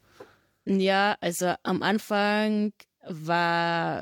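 No technical faults can be heard anywhere in this speech recording. Nothing in the sound points to a problem in how it was captured or delivered.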